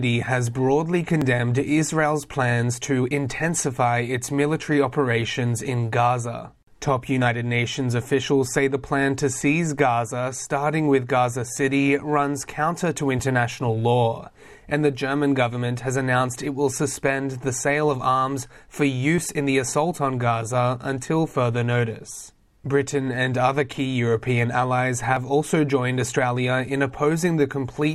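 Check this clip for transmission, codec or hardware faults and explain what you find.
Overlap between stream segments at 1.22, 7.22, 13.19, 19.18 and 25.17 s: overlapping 6-second segment timestamps make the player discard 5 to 15 milliseconds, so the waveform jumps, heard as regular tiny skips.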